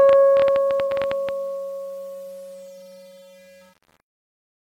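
From 0.09 to 1.3 s a train of clicks ticks over the music, around 12.6 per second at an uneven pace, roughly fifteen in all and about 10 dB above the signal. Their matching shape and persistence, unlike one isolated pop, point to likely electrical interference or a struggling interface.

Inside that stretch, from 0.87 to 0.92 s, AAC frame loss with concealment leaves a smeared, noisy patch about 43 ms long, which fits a single lost frame. The decoder guessed from the preceding spectrum, so the sound blurs rather than cutting to silence as a plain dropout would.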